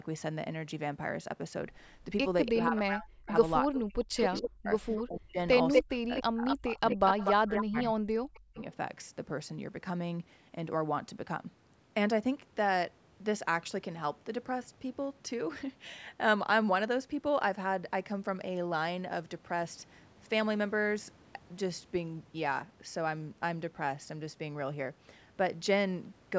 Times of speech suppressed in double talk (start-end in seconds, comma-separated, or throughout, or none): 2.49-8.58